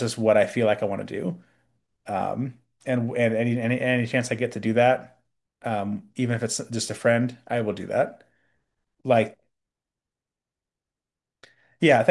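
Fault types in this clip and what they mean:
No faults detected in this speech recording.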